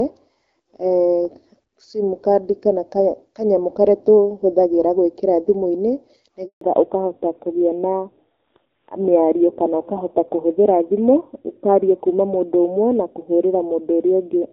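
A speech recording in which the sound cuts out abruptly at 6.45 s, fading within a few tens of milliseconds and staying silent for 160 ms until 6.61 s. This is a handover gap: the call was passed from one network link to another, and no speech frames arrived while the switch was made, so whatever was said in that stretch is simply missing rather than garbled. From 6.61 s to the end the sound is duller and rougher, with nothing above 4 kHz. That is a fallback to narrowband. Before the break the audio carries the wider band of HD Voice, with the light coding damage of an AMR-WB stream at around 12.65 kbit/s. After it, the missing upper band and the added rasp fit a drop to an older narrowband codec such as AMR-NB at about 7.4 kbit/s, which cannot represent anything above 4 kHz.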